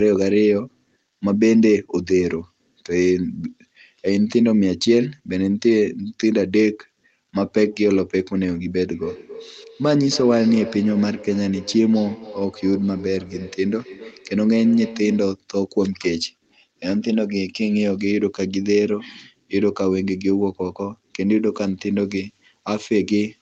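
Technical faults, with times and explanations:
8.86–15.43 s: feedback echo between two devices. Each stretch of speech returns about every third of a second, peaking around 16 dB below the direct sound and growing thinner and more ringing with each pass. A second device in the room replays the call, and this microphone captures it again. The local echo canceller removes only its own playback.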